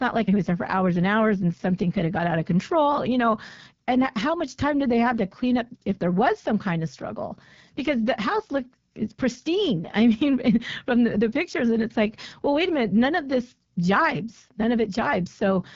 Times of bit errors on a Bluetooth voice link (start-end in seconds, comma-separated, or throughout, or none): none